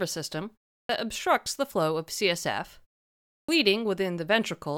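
At 0.83 s and 3.42 s, after pauses of 0.34 s and 0.64 s, the speech shows a clipped start after a pause: the output path needed time to wake, swallowing about 63 and 65 ms of onset. On a waveform, energy jumps straight from flat silence to full level with no ramp.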